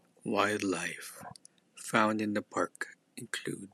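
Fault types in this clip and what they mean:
No technical faults can be heard anywhere in the signal of this speech recording.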